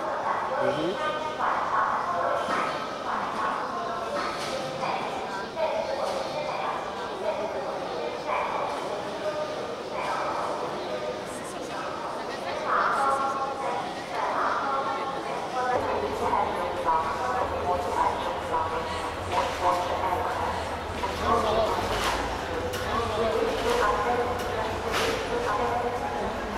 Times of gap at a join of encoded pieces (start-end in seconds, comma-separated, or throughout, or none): none